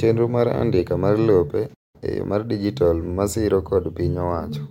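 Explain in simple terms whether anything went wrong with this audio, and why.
The player likely ran short of data and paused, a playback stall, so the speech cuts to silence for about 0.2 seconds, from 1.74 to 1.96 s.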